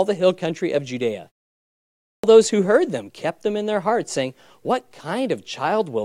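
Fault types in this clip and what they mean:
clipped start after a pause: After about 0.7 s of silence, the sound bursts in abruptly at 2.24 s on "those who heard them" with its opening bitten off. Roughly 0.3 s, from 1.94 s, never plays. The output device went idle or lost lock during the quiet gap and needed that long to wake again, so the start of the next phrase was swallowed before playback resumed.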